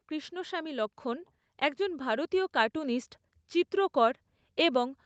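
Speech recorded through a call path shows automatic gain rising from 0.05 s to 3.03 s: the gain control judged the input too quiet and lifted its level by about 6 dB over roughly three seconds, so voice and background swell together, all within a band topping out near 8 kHz.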